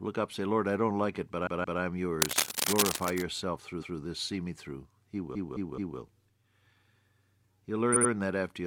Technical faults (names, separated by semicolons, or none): repeated frames; cable scratch noise